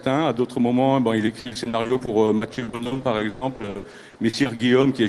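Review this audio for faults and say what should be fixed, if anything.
Repeated packet loss (robotic sound) runs from 1.25 to 4.85 s. Over that span, incoming audio repeatedly failed to arrive in time, and each hole was filled by stretching the last received sound. There are dozens of short gaps, the longest 120 ms, and about a third of the stretch is concealment rather than real signal. The result is choppy sound with pieces dropped out, set against a call-codec top end that stops near 12 kHz. To prevent this, stabilise the network path or enlarge the jitter buffer and add forward error correction so lost packets can be recovered.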